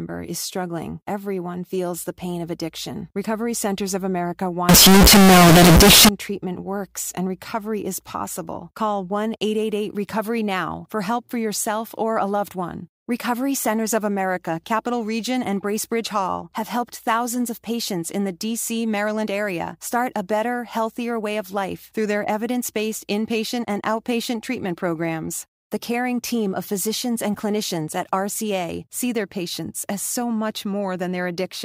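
From 4.69 to 6.09 s, just before "treatment works and recovery", the speech turns extremely loud, harsh and near-square, with background noise as loud as the voice though pitch survives. This is float read as integer, likely 32-bit float samples decoded as 32-bit integers.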